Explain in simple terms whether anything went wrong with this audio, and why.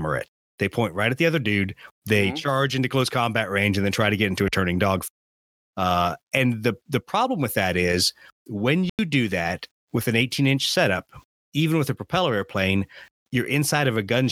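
At about 8.89 seconds the speech suddenly drops out for roughly a tenth of a second, ending at 8.99 s, then carries on as if nothing happened. The gap cuts in sharply rather than fading. This is a corrupt frame muted fault: some of the compressed data was damaged, the decoder rejected the spoiled pieces, and the player filled the gap with silence. The length of the hole fits two lost frames, and the timing afterwards stays in step.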